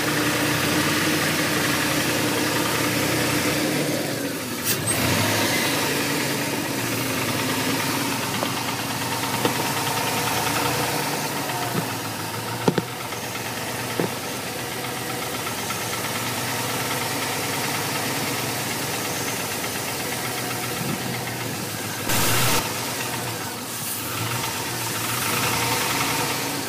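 From 22.09 to 22.59 s a harsh, buzzy distortion with hissing noise appears, likely a stuck bit, one sample bit frozen with a weight of about -20 dBFS.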